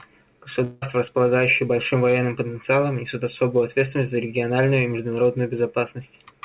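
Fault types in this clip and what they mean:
Long network dropout: from 0.64 to 0.84 s the speech gives way to a buzzy or hissy continuation of the preceding sound that fades without reaching silence, and roughly 180 ms never returns. This is likely a stretch of lost packets, with the receiver's concealment filling the gap.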